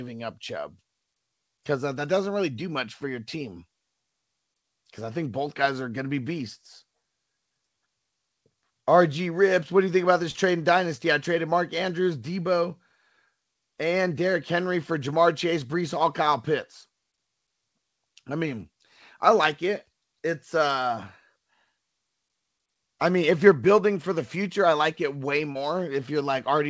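Short concealed packet loss occurs twice. About 30 ms of audio reached the decoder too late, and the receiver papered over each gap by extending the preceding sound and fading back into the real signal. The first, just after "you think about this", spans 10.31 to 10.44 s. The second follows "I like it way" at 25.52 to 25.56 s. Each is heard as a brief smear or wobble, against a G.722-style band that stops at 8 kHz.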